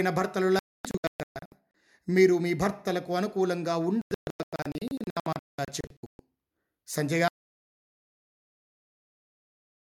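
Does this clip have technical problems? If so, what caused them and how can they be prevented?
Yes. Two digital broadcast dropouts break up this speech. From 0.59 to 1.52 s, about 0.74 s of sound is missing in short muted holes, the longest 0.26 s. From 4.02 to 6.20 s, about 1.28 s is missing, the longest hole 0.19 s. The receiver lost the signal or rejected corrupted frames and muted until clean ones returned. The hole lengths fit frames of roughly 32 ms. On a waveform these are flat gaps, and on a spectrogram they are blank vertical strips across all frequencies. A stronger signal, better antenna placement or stronger error protection would prevent them.

At 7.28 s an audio dropout to silence begins and lasts to the end. The sound stops abruptly and is followed by silence, with no room tone. The waveform is a flat line and the spectrogram is blank from that point on. The likely cause is that the input was lost, through a disconnected source, a failed link or an accidental mute, while the recorder kept writing. 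Securing connections and monitoring input levels during capture would prevent it.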